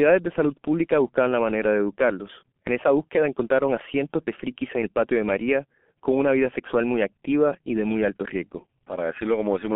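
G.723.1 codec damage runs through the whole clip, and it is heavy. The speech is confined to a telephone band of roughly 200 Hz to 3.4 kHz, so it sounds thin and muffled. The coarse, slow-updating voice model, which fits a rate near 6 kbit/s working on 30 ms frames, gives the speech a hoarse, buzzy texture and smears consonants together, as the codec cannot track rapid changes between frames.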